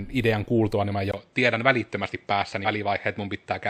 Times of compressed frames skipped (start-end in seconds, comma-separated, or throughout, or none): 2.64-2.67